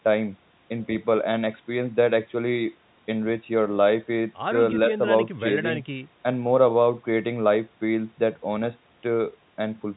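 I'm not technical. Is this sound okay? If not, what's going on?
Yes, nothing is wrong here.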